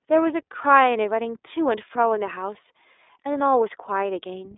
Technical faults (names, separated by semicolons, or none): iLBC codec